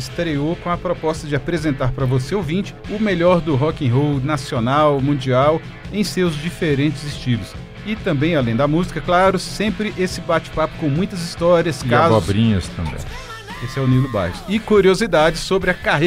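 No technical faults can be heard anywhere in the audio; the signal stays continuous and steady throughout.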